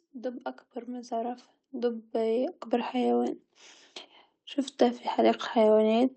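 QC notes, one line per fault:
0.05–3.3 s and 4.77–6.06 s, automatic gain rising: the gain control judged the input too quiet and kept raising its gain, by about 11 dB across the first stretch and about 4 dB across the second. Because the boost acts on the whole signal, the speech and the background noise swell up together, a slow climb lasting over three seconds the first time and about 1.3 seconds the second, all within the call path's band that stops near 8 kHz.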